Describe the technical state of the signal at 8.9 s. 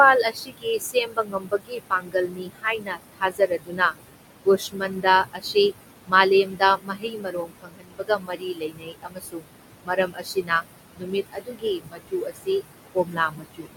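At 8.9 s the speech is being cut by the noise suppressor. From 6.44 to 9.48 s it mistakes quiet speech for noise and drops it by up to about 22 dB. The speech sounds swallowed and faint. The noise suppressor artifacts also run through this moment. The suppressor pulls the steady room noise down by about 21 dB, so the noise sinks between the words and rises under them.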